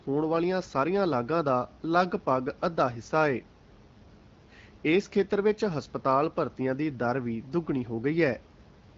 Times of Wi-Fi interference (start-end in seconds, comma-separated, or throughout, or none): none